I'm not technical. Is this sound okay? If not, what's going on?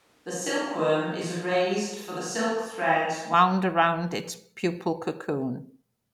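No. From the very start until about 3.34 s, the speech sounds roomy and hollow, with thinner bass and faint background noise. That's likely a switch to a distant microphone. It snaps back to close, full sound right at "around its pupal".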